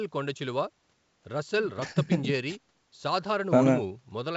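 Nothing goes wrong anywhere in this speech clip; it's simply G.722 wideband telephone coding at 64 kbit/s doing its usual job, with at most a faint trace of the coding in the top band.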